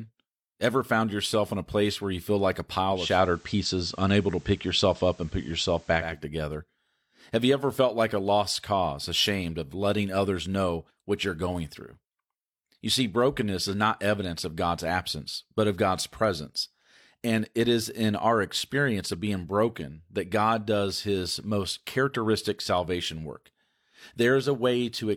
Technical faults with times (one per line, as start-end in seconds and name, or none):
2.89-6.24 digital radio blending to analogue